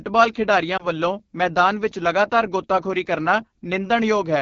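Speech carried over the AMR wideband (HD Voice) codec for its whole length, with coding damage that is plainly audible. The voice sounds rough and raspy, which fits the 8.85 kbit/s mode, one of AMR-WB's lowest rates. At that rate the pulse-driven vocal tract model is too coarse to reproduce speech cleanly below 6.4 kHz. At 0.77 to 0.87 s a lost AMR speech frame causes a brief dip or warble, consistent with a single 20 ms frame failing its checksum. The decoder reused the last good pitch and vocal tract settings at reduced gain to bridge the gap before normal decoding resumed.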